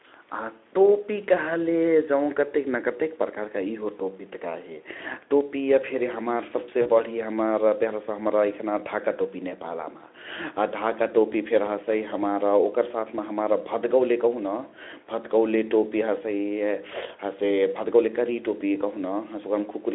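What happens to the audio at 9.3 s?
Nothing goes wrong at 9.3 s: the speech carries on intact there, with only the narrowed call band of the microphone processing and the Speex encoding it passes through.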